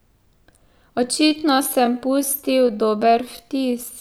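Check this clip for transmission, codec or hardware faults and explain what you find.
One fault: a time-stretched section running from 1.01 s to the end of the clip. At 1.01 s the speech abruptly slows to about 0.67 times its earlier pace while the pitch stays the same, so it drags. The likely cause is software stretching the audio to fit a length, repeating short pieces to hold pitch. On a spectrogram, harmonics keep their spacing but syllables widen. The waveform shows stretched, repeating segments.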